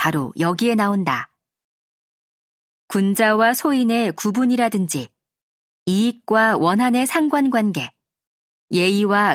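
No technical faults can be heard anywhere in the speech recording, and the signal holds steady throughout.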